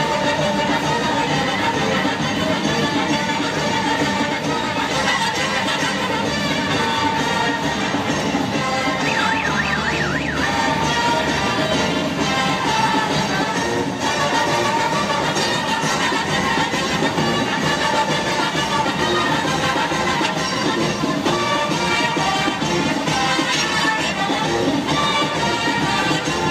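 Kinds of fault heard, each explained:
No technical fault can be heard anywhere in the recording; the signal holds steady throughout, with no interruptions, distortion or level problems.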